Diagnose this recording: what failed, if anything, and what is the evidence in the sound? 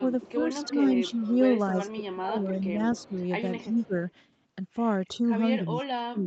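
The speech level is pulled down in three stretches at the call-processing stage. From 0.00 to 1.36 s it dips about 5 dB for roughly 0.3 s in total. From 1.94 to 3.94 s it drops about 15 dB across about a second. From 5.08 s to the end it falls about 30 dB. This is likely speech suppressed in double talk, where the echo canceller cannot separate the near talker from loudspeaker echo and attenuates both.

A faint delayed copy of the speech runs from 0.12 to 4.12 s. It trails by 272 ms and sits about 25 dB below the speech. It returns briefly from 5.79 to 5.85 s. This points to an echo leak at the call-processing stage, likely a loudspeaker echo that the far end's canceller did not fully remove before sending it back.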